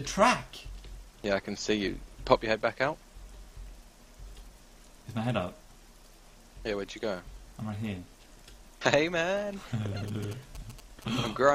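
A nearby 2G phone sending signalling traffic had its radio bursts rectified by the audio circuit, producing GSM signalling bursts from 10.08 to 11.50 s. They form a galloping dit-dit-dit run of short buzzes at about 217 Hz, roughly 15 dB below the main sound.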